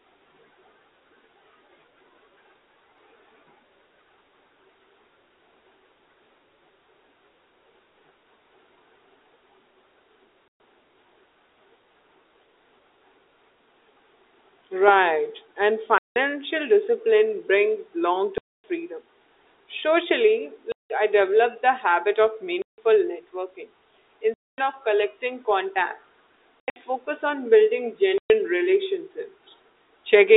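Packet loss filled with silence cuts into this speech recording eight times, at 10.48, 15.98, 18.38, 20.72, 22.62, 24.34, 26.61 and 28.18 s, with gaps of 120 to 260 ms. The receiver played dead air where packets went missing, so each hole starts and stops with hard edges. Gap lengths fall in 20 ms steps, which fits 20 ms packets. At 26.61 s the loss is broken up, with the longest run 80 ms. The audible narrowband G.711 telephone coding is not a fault.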